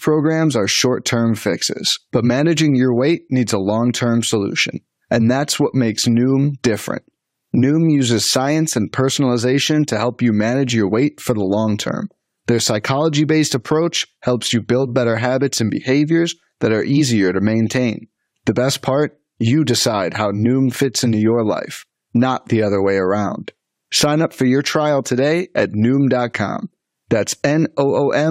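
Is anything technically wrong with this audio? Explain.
No, the signal shows no technical faults anywhere in the recording.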